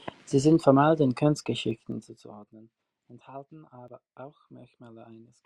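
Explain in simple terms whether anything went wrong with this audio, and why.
Between 1.66 and 2.52 seconds, after "sind formal den" and before "enthalten aber", the volume drops sharply in small jumps, around twenty a second. Each jump clicks, producing zipper noise, a ticking buzz. These drops are stepped.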